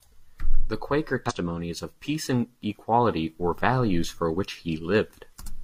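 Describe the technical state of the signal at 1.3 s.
Damaged data in the compressed stream hits at 1.26 to 1.32 s, a span of about 60 ms. Part of the encoded speech arrived corrupted, so the decoder could not read those frames properly, lost its place in the bitstream and had to hunt for the next valid frame header before resuming. What comes out over that stretch is a brief chirp, squawk, click or short hole in the speech.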